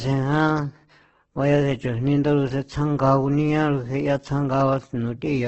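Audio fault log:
throughout Opus compression: the speech sounds grainy, rough and noisy, with nothing above 8.2 kHz. This is likely heavy Opus coding in its music mode, which fills starved bands with noise or folded copies of lower ones. The damage fits a bitrate near 12 kbps.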